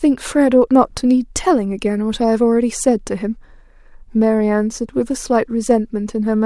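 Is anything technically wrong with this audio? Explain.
No, nothing technically wrong stood out on listening to this speech clip.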